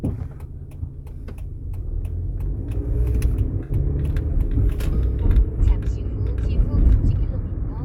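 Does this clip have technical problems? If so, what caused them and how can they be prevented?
Yes. AAC frame loss with concealment occurs from 3.63 to 3.71 s. About 64 ms of data, consistent with three AAC frames, was lost, and the decoder rebuilt it from the last good spectrum, leaving a brief smeared, noisy patch. Prevent it with forward error correction or retransmission and a larger jitter buffer on the transport.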